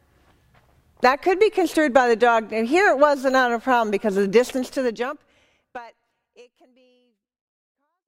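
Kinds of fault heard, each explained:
No kinds of fault are heard; the level simply eases down over roughly the last few seconds as an ordinary fade-out.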